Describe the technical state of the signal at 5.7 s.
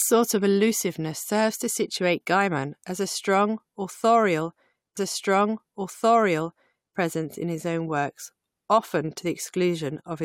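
At 5.7 s the signal is inside a stream segment repeat running from 4.96 to 6.96 s. The player queued the same segment twice, so about 2.0 s of speech plays a second time. A short blip marks the jump back at 4.96 s. On a spectrogram, the block from 4.96 to 6.96 s is an exact copy of the stretch just before it, starting at a thin vertical broadband click. In the waveform, the same envelope shape appears twice in a row.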